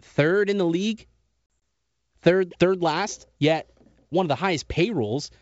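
A speech clip carried over G.722 wideband telephone coding at 64 kbit/s shows packet loss on an ADPCM call from 1.47 to 1.61 s, just after "in the league". About 60 ms of sound, in a few packets with the longest gap 40 ms, drops to hard-edged silence across roughly 160 ms. Unlike loss masked by concealment, each hole is a clean cut. The sound then returns slightly distorted, because the decoder's adaptive predictor and step size have drifted from the sender's. Within tens of milliseconds they realign.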